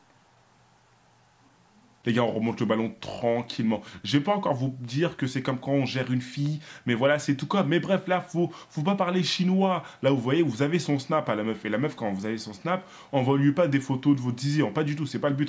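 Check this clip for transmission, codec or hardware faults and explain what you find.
No transmission, codec or hardware faults turn up anywhere in this clip.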